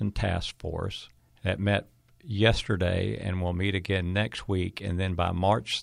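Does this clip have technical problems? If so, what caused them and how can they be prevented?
Yes, there's a single sharp click at 3.48 s, between "met yesterday and" and "meet again next week", likely dropped samples, where a couple of samples went missing so the waveform jumps. Giving the capture or transfer path more buffer headroom should keep it from skipping samples.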